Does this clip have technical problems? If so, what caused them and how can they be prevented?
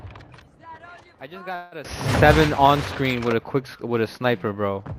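Yes. From 1.55 to 1.74 s there is a call audio freeze: the last sound is stretched into a fading buzz or hiss for about 165 ms, and then the audio resumes where it stopped. This is likely caused by delayed packets that emptied the jitter buffer. Unlike a dropout, nothing is lost; the audio is simply 165 ms later afterwards. A larger adaptive jitter buffer, or a steadier network path, would prevent it.

At 1.85 s there is a sudden gain jump of about 19 dB that lasts to the end. The sound and the background noise rise together in one step, which is likely a digital gain change applied without a ramp. A fade or compressor would instead rise gradually. Smoothing gain changes over several milliseconds would prevent it.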